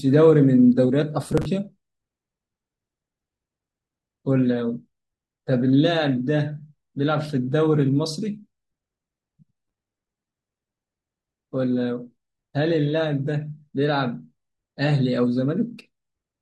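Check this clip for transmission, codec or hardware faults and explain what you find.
Two bursts of processor overload crackle, 1.24 to 1.46 s and a longer one from 9.53 to 10.98 s: missed buffer deadlines replay stale audio, giving gritty tearing consistent with roughly 5 ms buffers.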